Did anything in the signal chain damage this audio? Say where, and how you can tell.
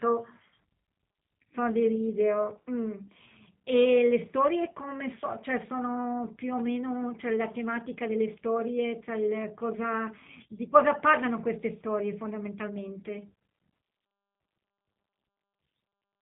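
Yes, at the codec stage, and it runs through the whole clip. It's a G.729-style coder: the speech has a rough, slightly synthetic edge and nothing gets past about 3.8 kHz, which fits an 8 kbit/s VoIP link rebuilding the speech from a filter, pitch predictor and sparse pulses.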